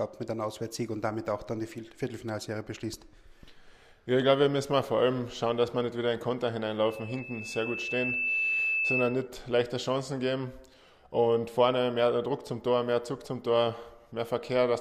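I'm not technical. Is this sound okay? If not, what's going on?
No. From about 6.86 to 9.28 seconds there is loudspeaker feedback squeal. A microphone is picking up the speaker it feeds, so the sound keeps looping back and getting louder. One pitch, at about 2.6 kHz, runs away on its own. It swells over roughly a second and a half into a shrill whistle. At its peak it is about as loud as everything else in the recording. Then it stops.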